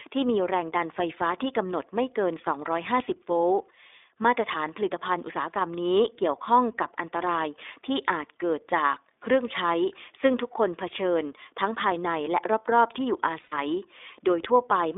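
Throughout, the speech carries the iLBC codec's narrowband sound, with plainly audible damage: a slightly rough, synthetic buzz. On a spectrogram, energy stops sharply at 3.6 kHz and thins below 300 Hz. The texture points to iLBC's 15.2 kbps mode, coding each 20 ms frame independently.

From 13.42 to 13.54 s, lost iLBC frames leave a 100 ms gap, consistent with five missing 20 ms frames. The decoder fills it by repeating the last pitch cycle mixed with noise, so it sounds like a held, buzzy vowel. The waveform shows a short run of repeated periodic cycles, and the spectrogram shows flat horizontal harmonic lines before normal speech resumes.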